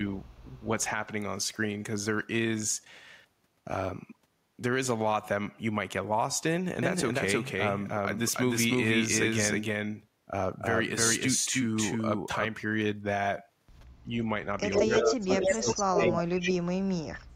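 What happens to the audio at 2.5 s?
Nothing goes wrong at 2.5 s; the speech continues intact through that moment with no dropout, click, distortion or other technical fault.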